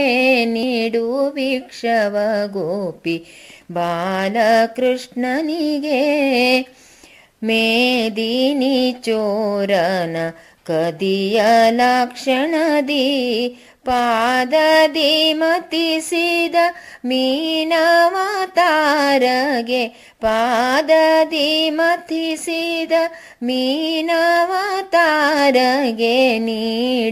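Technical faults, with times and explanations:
21.29 to 25.39 s, periodic USB or driver dropouts: about five sub-millisecond silent gaps every 1.024 s tick regularly, showing as hairline waveform breaks and thin vertical spectrogram stripes.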